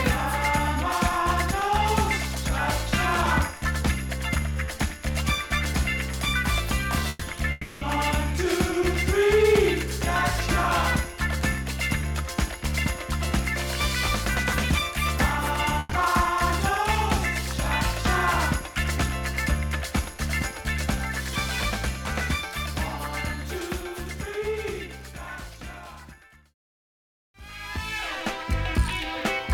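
At 7.09 s a burst of packet loss interrupts the audio for about 120 ms, lasting to 7.24 s. A short run of consecutive packets never reached the decoder in time, so the receiver concealed the hole by extending the last received sound and attenuating it across the gap. The result is a brief held buzz or hiss that fades, and then the audio resumes with roughly 120 ms of the original missing.

From 7.51 s to 7.84 s a longer interruption of about 300 ms is heard, with the last sound carried forward and decaying rather than cutting to silence. The concealment covers the whole stretch, so no dead air appears. When the signal returns, around 300 ms of material is gone. The length and smooth decay point to a long network dropout as the likely cause.

A second burst of packet loss occurs at 15.79 s, running to 15.94 s. It matches the first: about 120 ms of faded concealment, then a jump forward past the lost audio.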